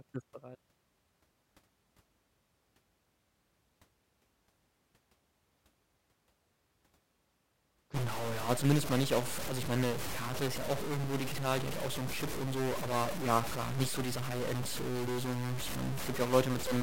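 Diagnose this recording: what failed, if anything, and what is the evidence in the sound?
From 7.94 s to the end, speech turns harsh and buzzy with noise filling pauses, likely a stuck converter bit worth about -35 dBFS.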